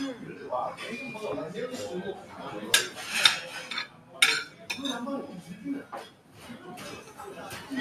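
A noise suppressor meant for speech has been left running on these sounds the whole way through. It treats steady tones and ambience as noise, so levels keep swinging by around 10 dB, and held parts and tails pump and thin while sharp attacks mostly slip past.

You can hear it where the suppressor clamps down on particular sounds: 0.18 to 0.41 s (about 5 dB down), 2.19 to 2.37 s (about 6 dB), 3.87 to 4.16 s and 6.1 to 6.44 s (about 7 dB each), and 4.5 to 4.65 s (about 6 dB). Each is a brief sag where a sustained sound sinks or its decay gets chopped short.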